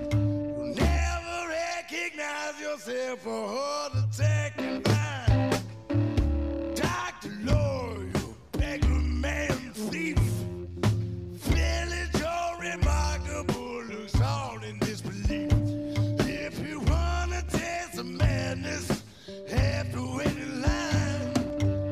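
From 7.53 s to 21.50 s, periodic USB or driver dropouts occur every 2.0 s, roughly seven in all. Each time, something briefly stalls the audio path and a couple of milliseconds are replaced by silence, producing evenly spaced ticks that appear only while sound is present.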